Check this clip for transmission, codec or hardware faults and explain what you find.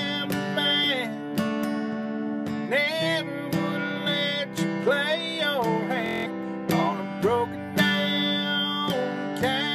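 One transmission fault is audible. A Bluetooth stutter runs from 6.06 to 6.27 s. Packets failed to arrive on time, so the receiver kept replaying its last short buffer until fresh data returned. The repeated slice gives a brief machine-gun buzz lasting about 0.2 s. The gap of roughly 186 ms fits about eight lost frames of around 23 ms each. The audio then picks up further along, as though it had kept playing through the dropout.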